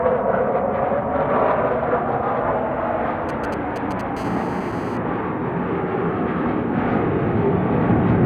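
A recording of everyday sounds carries two bursts of phone interference in quick succession. From 3.29 to 4.01 s come GSM signalling bursts: a galloping dit-dit-dit of brief 217 Hz buzzes, roughly 10 dB below the wanted sound. A nearby 2G phone is transmitting short radio bursts, as when a call or message is being set up, and the audio circuitry rectifies them. On a spectrogram they show as clustered vertical stripes; the waveform shows spiky packets. Then from 4.17 to 4.97 s a continuous GSM phone buzz sets in, a hard, raspy 217 Hz tone with many harmonics, about 17 dB below the signal and unrelated to it. This matches a phone in an active call pulsing 217 times a second. It appears as an evenly spaced harmonic comb of horizontal lines across the spectrogram and a regular train of pulses riding on the waveform.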